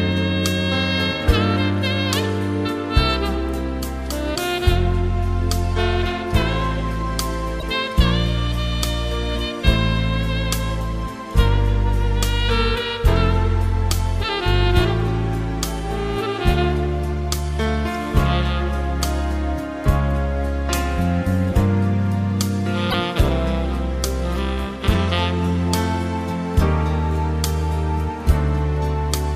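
At 7.59 to 7.63 s and again at 22.90 to 22.94 s, the audio jumps ahead with a brief glitch lasting about 40 ms. On the waveform each glitch shows an abrupt discontinuity. Both are likely a broken MP3 bit reservoir: after a cut, the following roughly 26 ms frames read back into foreign bytes.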